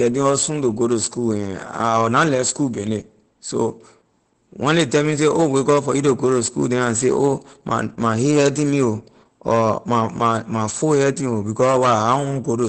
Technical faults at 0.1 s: Opus voice compression

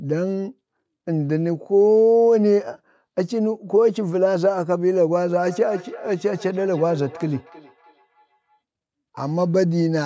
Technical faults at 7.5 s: feedback echo between two devices

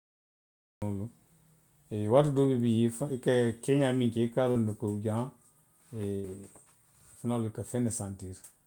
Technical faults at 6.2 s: burst of packet loss

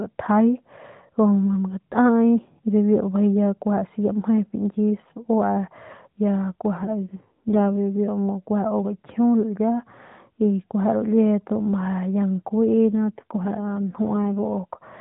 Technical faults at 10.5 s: none

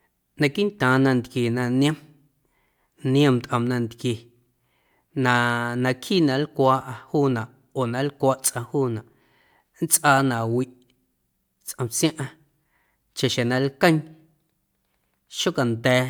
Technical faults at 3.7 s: none

